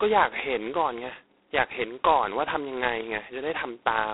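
Throughout, G.726 ADPCM coding is audible. Nothing passes above 3.9 kHz. A harsh, rasping hiss tracks the speech level, which fits the coarse 16 kbit/s mode.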